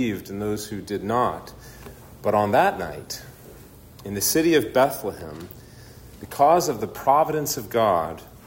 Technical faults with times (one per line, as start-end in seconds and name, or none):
none